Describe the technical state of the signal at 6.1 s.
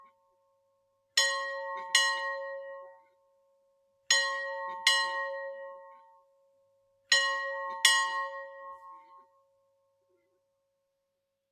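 At 6.1 s the signal sits inside a stretch, from 5.98 to 7.10 s, where sound is cut by the noise suppressor. It mistook the steady or decaying material for noise and pulled it down by up to about 15 dB. Sudden onsets still come through, which separates this from a dropout or mute, where everything vanishes together.

Underneath is a noise suppressor applied to non-speech sound, active through the whole clip. It keeps treating held tones, ambience and reverb as noise, so the level swings by roughly 20 dB. Tails sink and the sound pumps and thins, while attacks mostly get through, which sets it apart from a compressor's more even gain movement.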